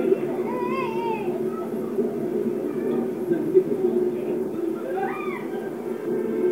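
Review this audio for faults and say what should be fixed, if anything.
Nothing in this recording of sounds needs fixing, and no faults can be heard. It needs no repair before use.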